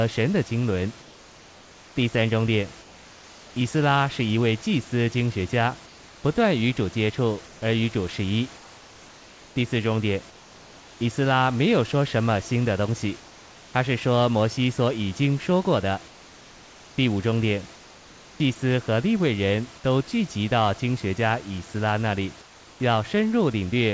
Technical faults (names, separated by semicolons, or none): comfort noise in place of the background